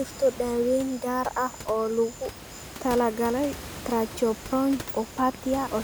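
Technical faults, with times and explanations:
No technical fault can be heard in the signal; the steady room noise beneath the speech, about 15 dB below it, belongs to the recording space rather than to the system.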